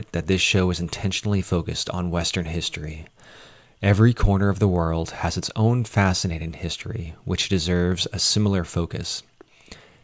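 Nothing in the recording trips up at any point, so there's no fault here to walk through.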